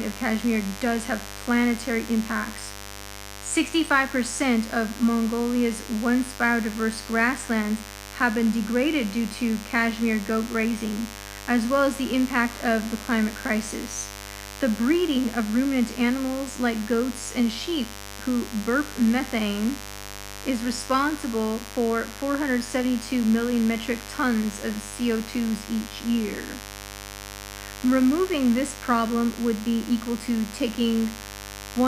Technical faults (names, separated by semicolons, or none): mains buzz